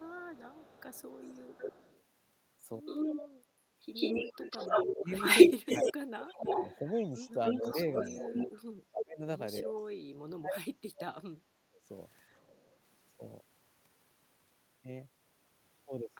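This speech clip has echo leak, double-talk suppression and background gating. A delayed copy of the voice returns from 0.0 to 2.03 s at 282 ms, faint at roughly 25 dB down. It returns from 2.85 to 3.28 s at 143 ms, near speech level. From 3.94 to 8.47 s it comes back at 296 ms, slightly louder than the speech, and again briefly at 9.77 to 9.82 s, faint. The likely cause is a far-end loudspeaker whose echo canceller let its pickup through. The talker's voice is also suppressed in double talk. It dips from 0.24 to 0.59 s by around 15 dB. Between 4.3 and 11.8 s it drops by up to roughly 30 dB, for about 3 s in all. This is likely the canceller turning down its own talker along with the loudspeaker echo. From 12.47 to 12.64 s, the background is gated by the echo canceller. The room sound falls by about 6 dB for roughly 150 ms, then recovers.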